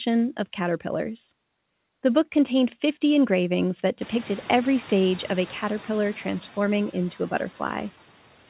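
A speech clip, and the background noise jumps by roughly 20 dB at about 4 s, right after "engravings that". The noise suppressor catching up shows here: from 4.02 s to 6.12 s the noise comes through with less reduction, then sinks by about 4 dB once the estimate adapts over those 2.1 s, before "transforming into a". The nothing-above-4 kHz band limit sounds like a G.711 mu-law call path at 64 kbps.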